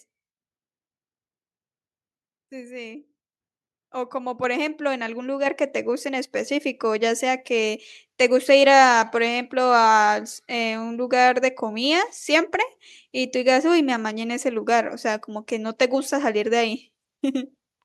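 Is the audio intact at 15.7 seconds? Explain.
Yes, the audio is intact at 15.7 seconds, with no fault present at that moment.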